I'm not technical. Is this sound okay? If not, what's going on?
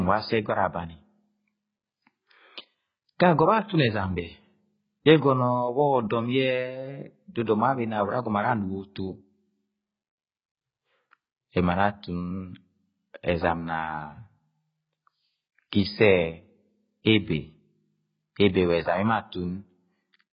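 No. The speech was most likely squeezed hard by AAC compression, a method that shrinks audio files by throwing away detail the ear is expected to miss. Here it threw away a lot: nothing above about 5 kHz survives, so the crisp top end of the speech is gone. The result sounds dull and muffled throughout, with a smeared, warbling or fizzy quality, especially on hissy sounds like s and sh.

There is also pre-echo at about 7.46 s. The same compression works on short blocks of sound and spreads its background noise evenly across each block. When a sudden, sharp sound lands near the end of a block, that noise leaks into the quiet moment just before it. You hear a brief hiss, about a fiftieth of a second long, arriving just ahead of the sound, which then starts softer and blurrier than it should.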